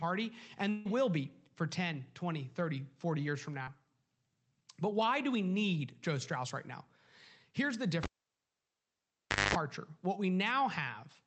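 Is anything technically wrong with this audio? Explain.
Yes, three faults are audible in this speech.

From 0.69 to 0.87 s there is a gap that sounds like a long network dropout, likely caused by about 160 ms of audio failing to arrive. The receiver had nothing new to decode and kept extending the last sound for the full stretch rather than going silent. It comes out as a buzzy continuation that thins and fades, and speech resumes afterwards with that portion missing.

At 3.63 to 3.69 s there is a short concealed packet loss. Roughly 40 ms of the call reached the decoder too late or not at all, so the receiver filled the hole by carrying the preceding sound forward, then blended into the real signal again. It is heard as a brief smear or wobble in the speech.

From 8.03 to 9.55 s the cable was pulled and plugged in. Pulling out a live connector makes a pop, and then the signal is gone for nearly 1.5 s, leaving near silence. 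As the plug goes back in, the tip makes contact before the ground does, which lets in about 0.22 s of 50 Hz mains buzz. A second pop follows when the full connection returns. The speech passes through an Opus call path whose 8 kHz bandwidth limits the top end.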